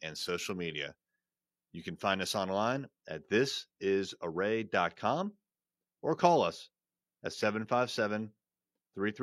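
From 2.72 s to the end, the speech turns dull and muffled, its top end rolling away smoothly to about 11 dB down at 10 kHz relative to 1 kHz. This is de-emphasis applied wrongly: a treble-cutting filter either hit audio that had no pre-emphasis to undo or was applied twice.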